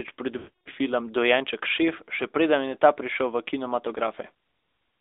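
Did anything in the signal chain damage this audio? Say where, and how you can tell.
Yes. The codec stage damaged it throughout. This is the AMR narrowband mobile codec. The speech is confined to roughly 300 Hz to 3.7 kHz, and nothing above 4 kHz survives. The buzzy, synthetic texture fits a mid-rate mode near 10 kbps. Pulse-driven vocal tract modelling causes it.

The network stage adds lost AMR speech frames from 0.38 to 0.68 s. About 280 ms of speech is missing, which points to a run of about fourteen frames. The decoder repeats its last good settings with falling gain. So the sound smears, then fades to silence.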